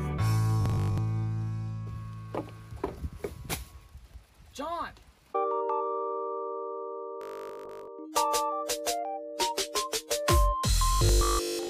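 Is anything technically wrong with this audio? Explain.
Yes. Robotic sound from repeated short buffers appears at 0.62–0.98 s, 7.21–7.87 s and 10.93–11.69 s. The sound turns into a rigid, metallic buzz at a fixed 50 Hz. That points to a 20 ms chunk being replayed, likely because audio arrived too slowly. Most of the material is replaced in the first and last spans, and nearly all of it in the middle one. Unlike dropouts or a single frozen loop, the buzz still loosely tracks the sound's contour.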